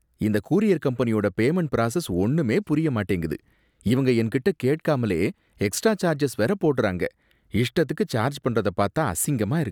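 No technical faults are audible.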